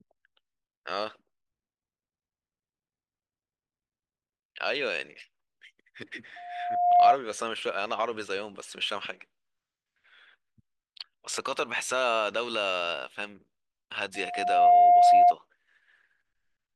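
Loudspeaker feedback squeal hits twice in this speech, 6.36 to 7.18 s and 14.14 to 15.34 s. A 709 Hz tone swells within about 0.7 s the first time and half a second the second to well above the voice as the mic-speaker loop runs away.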